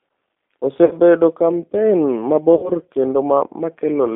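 The whole clip runs through a G.729 codec, and you can plainly hear it. The band is squeezed to roughly 250 Hz up to 3.6 kHz, and the speech has that slightly rough, synthetic edge that fits an 8 kbit/s coder. It's rebuilding each 10 ms frame from a vocal tract filter, a pitch predictor and a handful of pulses, rather than carrying the actual waveform.

There are two dropouts handled by VoIP packet loss concealment in the speech codec. The first runs from about 0.85 to 0.95 s and covers around 60 ms of missing audio. The second, from about 2.55 to 2.71 s, is longer, around 80 ms. In both, the decoder keeps going on its last pitch and filter settings and turns the gain down frame by frame. You get the sound smeared into a buzzy tone or coloured noise that fades, instead of a clean gap. Because each frame leans on the previous one, the speech sounds weak and a bit warped for a little while after the stream comes back.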